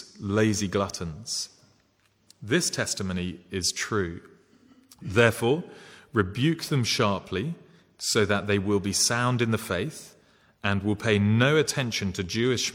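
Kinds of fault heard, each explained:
Nothing technical stands out here at all, so there's no fault to point to in this one.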